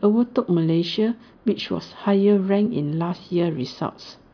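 No technical faults turn up anywhere in the recording.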